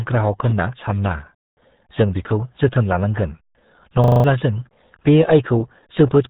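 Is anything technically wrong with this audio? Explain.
Yes, there are two faults.

Throughout, the speech sounds heavily muffled and gargly, with nothing above about 3.8 kHz. This is the RealAudio 14.4 codec: a speech coder for dial-up modems squeezes the signal into 8 kbit/s, discarding the upper band and smearing what remains into a watery texture.

From 4.04 to 4.24 s, just before "जों बे", the sound turns into a rough, rattling buzz at 25 Hz as one 40 ms slice repeats five times. This is a system hang loop. The computer or driver stalled while the audio hardware kept replaying the same short ring buffer, so about a fifth of a second of real audio is missing.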